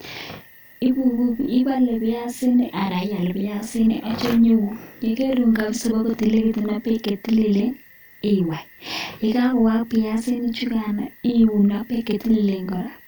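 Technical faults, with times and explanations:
Throughout, channel delay (doubling): one channel of the speech arrives 40 ms behind the other, and when the two are summed to mono the late copy stands apart as a second, equally loud voice, heard as doubling or a tight slap echo on every syllable.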